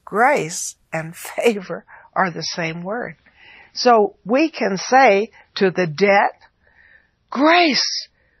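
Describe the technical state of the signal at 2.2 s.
At 2.2 s you're in the middle of an adaptive stream at a lower bitrate. From 1.57 s to the end, the player has dropped to a cheaper encode of the same speech, and it sounds like a fall from around 128 kbit/s MP3 down to roughly 24 kbit/s. Nothing survives above 5.9 kHz, so the top end is gone and the sound turns dull and a bit swirly with codec artefacts. The switch is abrupt and leaves no gap.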